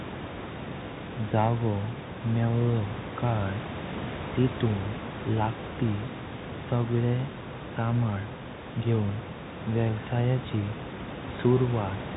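Throughout the speech, the Bluetooth CVSD headset codec caps the band at 4 kHz, so a spectrogram shows a hard ceiling there. Its one-bit delta steps lag loud high sounds, leaving clipped-looking slopes on the waveform, scratchy s sounds and granular hiss over room noise about 13 dB down, fitting a 64 kbps link.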